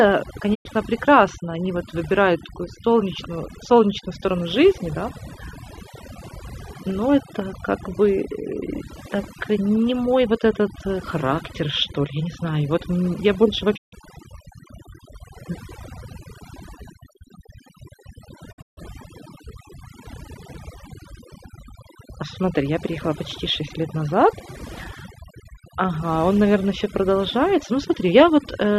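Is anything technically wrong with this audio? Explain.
Yes, two problems are audible in this speech clip.

Overdone noise removal runs through the whole recording. A noise reduction stage was set too aggressively, so any frequency band sitting close to its noise estimate gets pulled down hard or switched off, and the softer parts of the voice fall below that line along with the noise. The result is a lowered background that breaks up into twinkling specks.

A digital broadcast dropout interrupts the audio three times. The receiver stopped getting usable frames and muted until clean ones arrived again. Each gap starts with a quick fade of about 20 ms. The first hole runs from 0.53 to 0.67 s. The second, from 13.76 to 13.94 s, comes right after "вот мь я больше". The third, between 18.51 and 18.79 s, breaks into several short holes over about 240 ms, the longest lasting 144 ms. The lengths fit the loss of a handful of frames of roughly 24 ms each, and whatever was broadcast during those gaps is gone.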